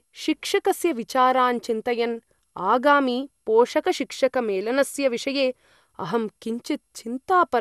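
Speech throughout sounds swirly and hollow with nothing above 12.6 kHz: generation loss, likely from about seven MP2 re-encodes, smearing beyond what one encode would.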